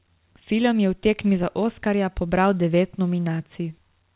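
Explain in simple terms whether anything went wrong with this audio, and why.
Nothing went wrong here: the speech came over a normal call connection using the standard G.711 phone codec, which keeps only the sound below 4 kHz, just as an ordinary phone line does, and that's exactly what you hear.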